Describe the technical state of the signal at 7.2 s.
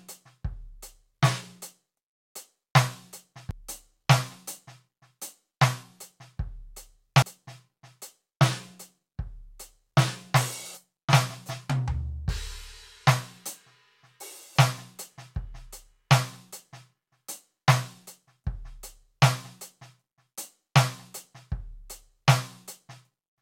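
At 7.22 s, compressed frames skipped: about three decoder frames vanish, so the music lurches ahead by roughly 300 ms.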